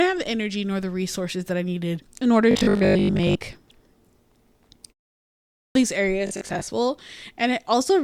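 From 2.51 to 3.37 s the speech turns into a rigid, metallic buzz pitched at 50 Hz that still roughly tracks the words. This is robotic sound from repeated short buffers, likely caused by new audio arriving too seldom, so that the playback fills each gap by looping the last 20 ms while the real audio is skipped. Most of this stretch is repeated material. The same buzz at 50 Hz returns from 6.27 to 6.69 s, with a smaller share of it repeated.

At 5.51 s, after a 0.66 s pause, a word bursts out of silence with its opening missing. About 243 ms is lost, up to 5.75 s. This is a clipped start after a pause: the output device sleeps through the silence and swallows the first part of the sound while it wakes and locks on again.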